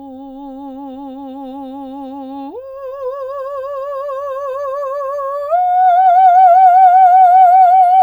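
No faults are audible anywhere in this music clip.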